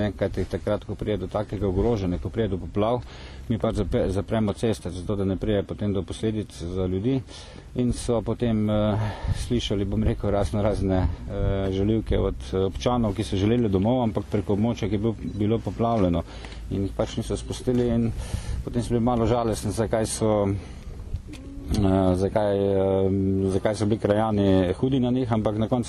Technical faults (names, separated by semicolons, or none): none